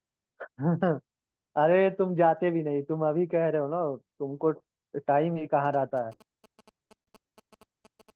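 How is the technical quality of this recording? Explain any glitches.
The speech has two faults: four short dropouts in the second half, and a buzzing interference pattern that enters late and continues to the end.

Short concealed packet loss: at 5.33 s, 5.89 s and 7.29 s there are brief smears or wobbles of about 20 ms, and at 7.03 s a longer wobble of about 40 ms. Each time, audio packets arrived too late, so the receiver extended the preceding sound to bridge the gap before blending back into the real signal.

GSM signalling bursts: from 5.65 s to the end, a galloping dit-dit-dit of short buzzes sits well below the speech, at roughly 25 dB down. A nearby 2G phone was exchanging signalling bursts at about 217 Hz, and the audio circuitry rectified that radio energy into audible buzz.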